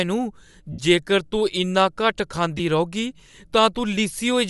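Across the whole speech clip there is a breathy, grainy edge on the upper frequencies, with noise-like hiss standing in for fine detail. This is likely Bluetooth LC3 compression, with a character that fits 48 kbps and 7.5 ms frames, zeroing much of the treble and filling it with noise.

From 0.73 to 0.79 s, just before "जेकर तूं इन्ना", the speech turns into a brief noisy smear lasting 60 ms. A shorter smear follows at 2.58 to 2.60 s. These are lost LE Audio frames. The first gap fits eight 7.5 ms frames and the second fits two, which the decoder concealed by repeating the last spectrum with random signs.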